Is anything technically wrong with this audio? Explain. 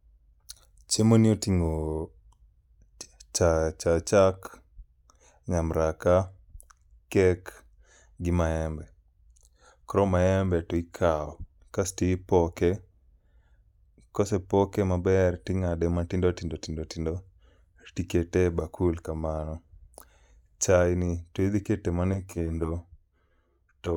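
Yes. From 22.14 s to the end, just after "to idhi keto mana", the speech turns hollow and phasey, with a thin, boxy colour that wasn't there before. This is channel delay causing comb filtering. One channel arrives around 10 ms late, and when the two are summed to mono the shared content cancels at regularly spaced frequencies. The first notch sits around 40 Hz, and further fixed notches repeat up the spectrum, carving the voice into that hollow tone.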